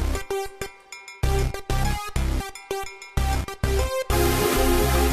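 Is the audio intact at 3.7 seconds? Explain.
Yes, the audio is intact at 3.7 seconds, with no dropout, click, distortion or other fault at that point.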